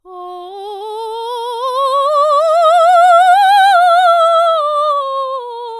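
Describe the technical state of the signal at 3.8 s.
At 3.8 s the music plays through intact, with no audible technical fault at that point.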